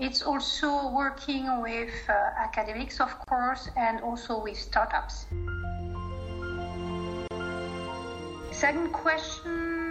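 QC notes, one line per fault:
Throughout: MP3 compression. The detail sounds watery and swirly, with chirpy, metallic edges on bright sounds and attacks that smear instead of landing clean. That's what you get when the encoder runs short of bits. It drops the treble above a fixed point and lets weak frequency components flicker on and off frame to frame. The damage is plainly audible, which fits a low-rate encode of about 64 kbps and is likely the cause.
3.24 s and 7.28 s: gap at a join of encoded pieces, twice, 4 s apart. Each time a short hole of silence cuts into continuous sound, about 35 ms at the first and 32 ms at the second. The edges are smeared by the codec, and then the audio picks up exactly where it left off. That points to chunks encoded separately and butted together untrimmed, so each encoder's start-up silence and end padding stayed in at the seam.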